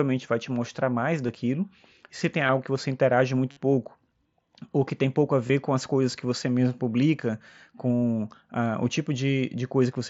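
Concealed Bluetooth headset packet loss runs through the speech at 1.26–1.29 s, 2.46–2.49 s, 3.51–3.57 s, 5.47–5.50 s and 7.96 s. Packets dropped on the headset link, and the receiver patched each hole by repeating the closest-matching piece of recent waveform. The short ones, around 22 ms, are runs of three lost frames each. The 60 ms gap and the roughly 75 ms one at 7.96 s turn into a held, buzzy tone with a slight warble as real audio comes back, which fits several lost mSBC frames in a row.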